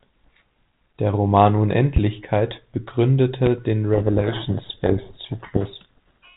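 At 1.96 to 1.99 s a single loud pop cuts across the speech, peaking around 15 dB above it. A second, smaller one follows at 3.46 to 3.49 s, about 10 dB over the signal. Each is a brief sharp transient sitting on top of the audio, which continues unbroken beneath it. The likely cause is an electrical pulse, such as a switch transient, static discharge or driver glitch, entering the signal chain and being shaped into a short thump by the downstream circuitry.

From 3.94 s through 6.36 s a codec payload misread takes over. The link is G.726 ADPCM at 32 kbit/s, which is band-limited below 4 kHz and carries only light coding noise. Here the decoder is taking the bits of each code word in the wrong order, so it reconstructs the wrong prediction differences. The speech is buried under harsh, rasping distortion for the rest of that span.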